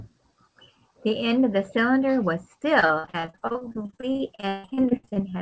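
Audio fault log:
2.80–5.18 s, repeated packet loss (robotic sound): The speech breaks up into choppy fragments with pieces missing. Short dropouts recur all through this stretch, dozens of them, the longest about 150 ms. Each hole is patched by stretching the sound just before it, and the next hole arrives soon after. Around 40% of the stretch is this patched-in sound, which gives the buzzy, robotic quality. Through the call path, nothing is heard above 8 kHz.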